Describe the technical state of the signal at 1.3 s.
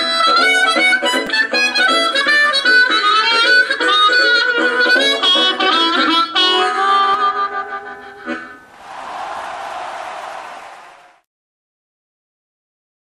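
At 1.27 s there is a repeated buffer: new audio arrived late, so the last 5 ms piece played twice more with hard joins, losing about 10 ms. Being so small, it comes across as a click or brief buzz. Unlike a dropout, the gap is filled with repeated sound, not silence.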